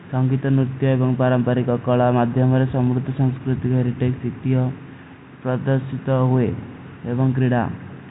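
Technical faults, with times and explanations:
No technical faults; the speech is band-limited below 4 kHz by G.711 mu-law telephone coding at 64 kbps, which is that format working as designed.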